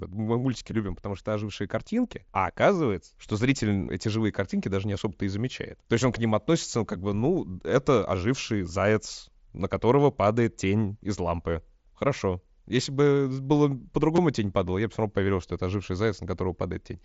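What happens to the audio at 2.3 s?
At 2.34 s there is a concealed Bluetooth headset packet loss: about 7.5 ms of audio, consistent with one dropped packet, is filled by the receiver repeating the closest-matching stretch of the preceding waveform. As a single short loss, it is almost inaudible.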